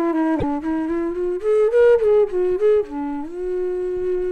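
At 0.38 s the sound briefly breaks up and jumps ahead, with a glitch lasting until about 0.44 s, roughly two frames of 26.1 ms each. The likely cause is a broken MP3 bit reservoir: frames were lost, so the frames after the gap reached back into earlier frames for their borrowed data and found bytes from the wrong place. They decoded into garbage instead of the missing audio until the stream recovered.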